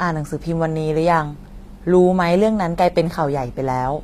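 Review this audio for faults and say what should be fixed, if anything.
The encoder was likely HE-AAC running at a low bitrate, which fits a stream of around 24 kbps. Throughout the clip it codes only the lower spectrum and rebuilds the treble by copying those bands upward under a coarse envelope, so the upper harmonics don't line up with the real ones. The damage is plainly audible: s sounds in the speech come out gritty and lispy, with a metallic sheen, and nothing reaches above 14.9 kHz. Encoding at a higher bitrate with plain AAC or another full-band codec would prevent this.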